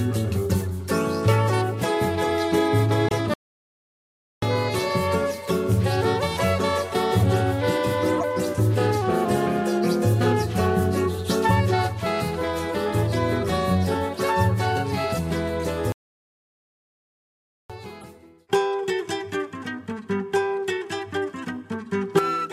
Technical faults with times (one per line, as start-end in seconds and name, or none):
3.08-3.11 corrupt frame decoded
3.34-4.42 playback stall
8.18-8.23 corrupt frame decoded
15.92-17.70 playback stall
18.01-18.04 corrupt frame decoded